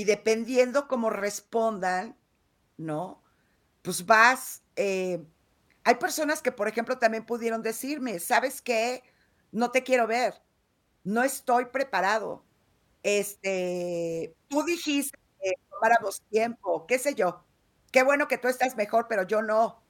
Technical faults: none

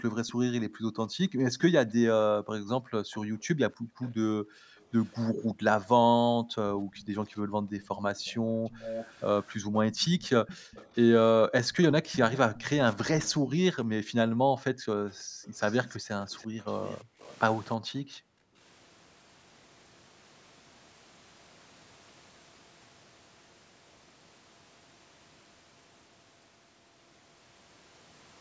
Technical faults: echo leak; background gated by the echo canceller

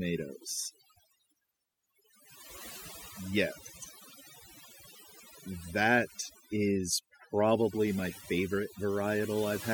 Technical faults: overdone noise removal

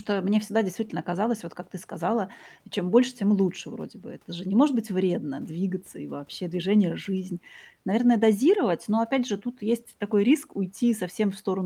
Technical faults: none

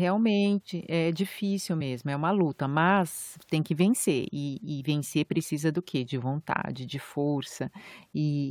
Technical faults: damaged data in a compressed stream

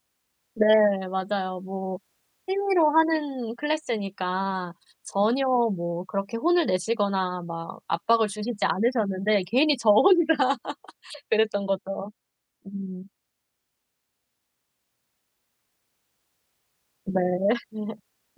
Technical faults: none

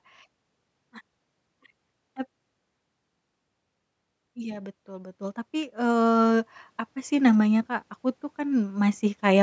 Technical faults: automatic gain rising

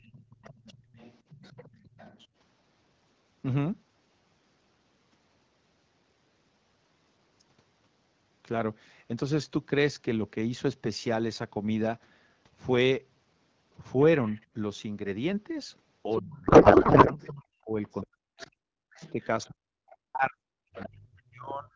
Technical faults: other side's voice leaking through; speech suppressed in double talk; codec payload misread

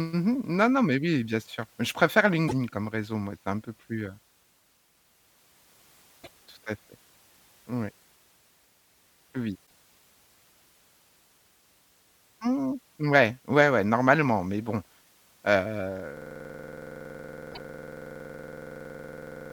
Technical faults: broken MP3 bit reservoir; system hang loop

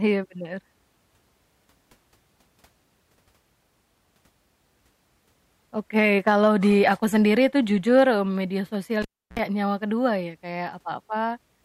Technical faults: cable pulled and plugged in

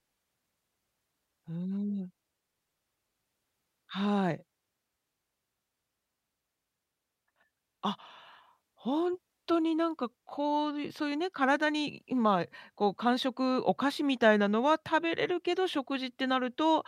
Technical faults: none

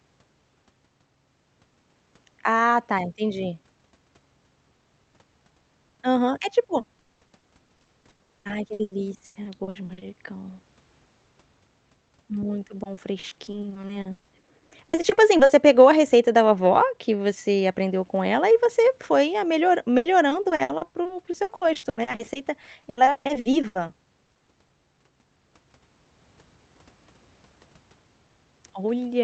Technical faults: repeated packet loss (robotic sound)

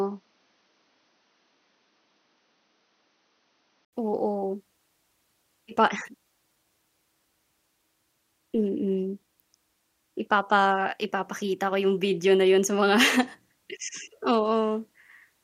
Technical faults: input switched to a poorer device

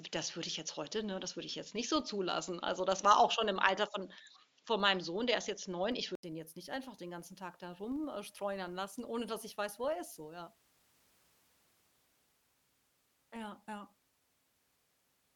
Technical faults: filter restarted on every block; input switched to a poorer device

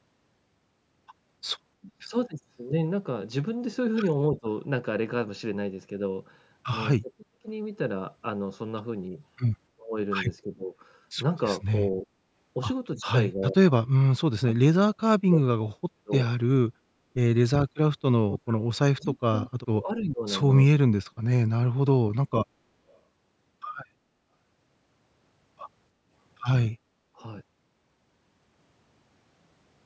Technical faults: speech suppressed in double talk; echo leak

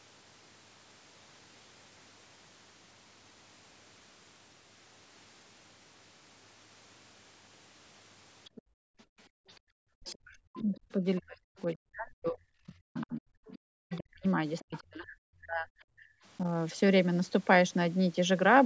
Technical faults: other side's voice leaking through; background gated by the echo canceller; speech suppressed in double talk

